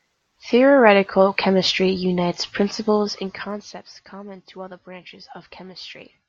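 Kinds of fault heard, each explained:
Zipper noise: the level drops about 20 dB in unsmoothed 1 dB jumps, around fifteen a second, so a fast ticking rides on the speech after "chemistry unites".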